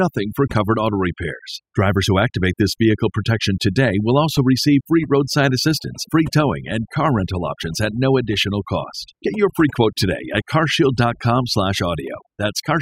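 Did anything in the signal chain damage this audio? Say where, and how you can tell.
Yes. Throughout the speech, the gaps between phrases drop to near silence dotted with twinkling, chirpy specks, and the voice itself has its quieter parts eaten away. That is overdone noise removal at the processing stage: a noise reducer pushed too hard decides which frequency bands sit close to its noise estimate and pulls them down almost to nothing. The quieter parts of the voice fall into those bands too, so they vanish along with the noise.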